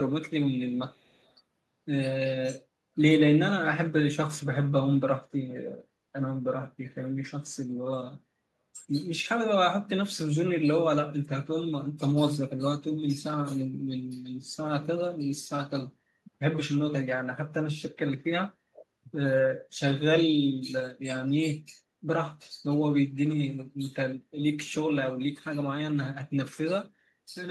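From 0.76 to 1.33 s a faint echo leak trails the speech by 248 ms at roughly 40 dB below it. This is likely a far-end echo canceller passing residual loudspeaker pickup. On a spectrogram it shows as a weak, shifted copy of the speech harmonics.

At 8.39 to 8.46 s, 18.67 to 18.87 s and 21.8 to 21.88 s the speech is suppressed in double talk. The level dips slightly, then almost entirely, then moderately. This is likely an echo canceller attenuating during overlap, and it appears as brief notches in the waveform envelope.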